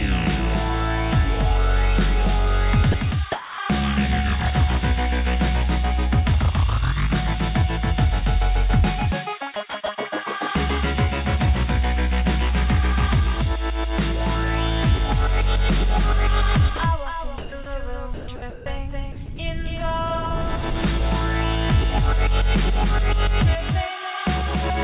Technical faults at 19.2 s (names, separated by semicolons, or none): doubled audio track; sound chopped by the voice detector